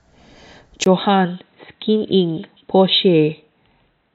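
Speech, and at 0.84 s a gap of about 20 ms is followed by a duller, boxier sound with nothing above 4 kHz. It is roughly 10 dB quieter and carries a faint new noise floor to the end, likely an input switched to a poorer device.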